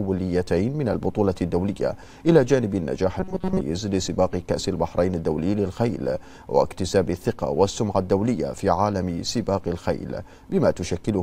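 From 3.20 to 3.61 s the sound turns into a rigid metallic buzz at 188 Hz, robotic sound from repeated short buffers, likely from a chunk of about 5 ms being replayed for most of that stretch. Unlike steady hum, the buzz still loosely tracks the underlying sound.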